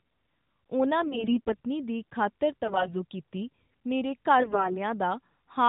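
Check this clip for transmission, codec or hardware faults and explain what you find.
The speech has AMR bit errors in three bursts, heard over narrowband AMR coding whose light coloration points to the top 12.2 kbps mode.

AMR bit errors at 1.00–1.60 s, 2.64–2.95 s and 4.40–4.77 s. Several percent of the weakly protected bits arrive flipped, so pulse positions and fine gain and spectral values go wrong. The voice turns hoarse, scratchy and gargly, but pitch and level hold. Lost frames would mute or smear instead.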